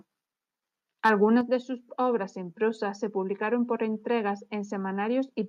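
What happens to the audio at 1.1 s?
From 1.05 to 1.24 s, just before "de sus obras en", the loudest part of the speech turns harsh and crackly, with a gritty, buzzing edge on the peaks. This is most likely microphone overload: the input level ran about 3 dB past what the converter could take, so the tops of the waveform were sheared flat. Only a small fraction of samples, around one or two percent, are cut, but that flattening is what produces the distortion.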